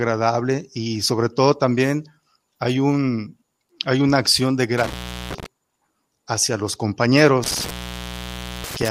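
A speech recording with an intermittent contact fault. Just after "hay una acción de", from 4.78 to 5.46 s, the signal drops out for about 0.37 s. It drops out again from 7.44 s to the end, at 8.91 s, for about 0.93 s. A loose plug or cable is briefly opening the line. Crackle marks each break, and faint hiss is left in the gap.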